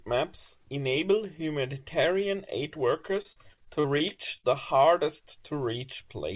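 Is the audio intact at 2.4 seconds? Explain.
Yes, the speech at 2.4 seconds is intact, with only the narrowband sound of the call path, which carries nothing above 4 kHz.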